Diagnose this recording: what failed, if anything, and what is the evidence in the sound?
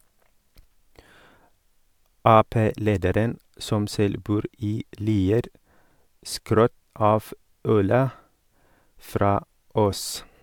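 Nothing failed: no stage in the chain, from capture through to playback, leaves an audible trace anywhere in this speech recording.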